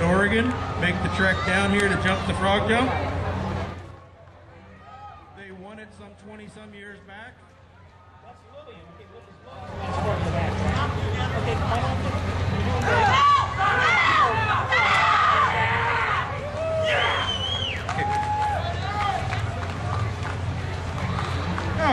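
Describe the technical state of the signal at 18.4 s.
At 18.4 s the signal is intact, with no dropout, distortion or other fault to be heard at that moment.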